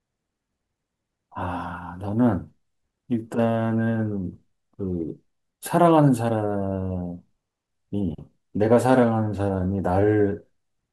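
No technical faults can be heard anywhere in the speech. There is nothing to place in time or trace to a cause.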